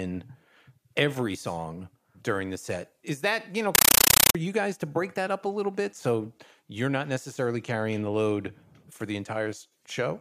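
After "that you know", from 3.75 to 4.35 s, loud chattering static pulses 31 times a second: a compressed stream played as audio, likely undecoded AC-3 frames read as ordinary samples.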